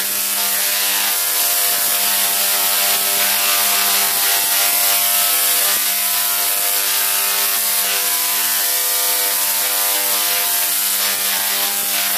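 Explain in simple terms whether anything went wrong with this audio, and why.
From 1.40 s to 5.78 s there's a doubled audio track: the same sound plays twice, with a somewhat quieter copy trailing about a third of a second behind. It likely came from a second, slower recording path or an edit holding two out-of-step copies.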